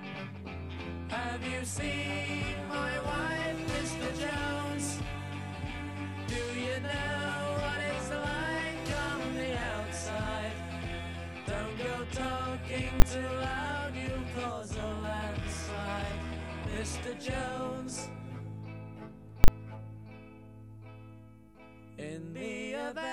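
At 13.00–13.02 s and 19.44–19.48 s, invalid numbers hit full scale: a bad calculation pins 20 ms and 40 ms blocks at one extreme value, each heard as one sharp bang.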